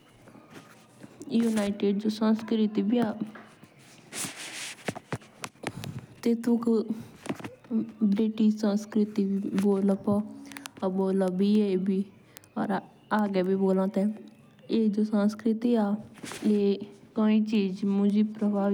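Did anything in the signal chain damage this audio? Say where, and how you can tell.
Yes. A digital interconnect was read by a receiver free-running on its own clock, roughly 70 ppm off the sender's, so word clock ticks, each a single slipped sample, recur about every 0.3 s from 0.37 s to 18.64 s, around seventy sharp clicks of uneven strength over the speech.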